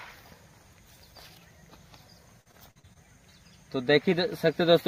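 From 2.41 to 2.97 s, repeated packet loss (robotic sound): brief dropouts up to 43 ms, each patched by extending earlier audio, leave the sound choppy and fragmented.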